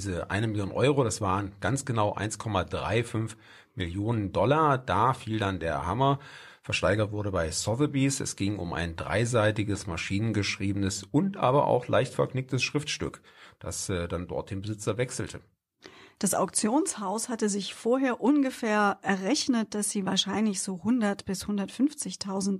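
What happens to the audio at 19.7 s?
Nothing goes wrong at 19.7 s; the speech carries on intact through that moment, with no dropout, click or distortion.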